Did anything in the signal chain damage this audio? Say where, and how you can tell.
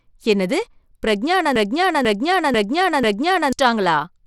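Yes. Throughout the speech the top end is gritty and flickers, with coarse noise riding on the sound and nothing audible above 17.5 kHz. That points to the codec stage: likely Bluetooth SBC compression starving its upper sub-bands, which fits a low bitrate around 96 kbps.

From 1.56 to 3.53 s, a 0.49 s fragment repeats exactly, back to back, four times, and the speech that should have played there is lost. This is a broken-record loop, likely a stalled playback or stream buffer resending the last block it held.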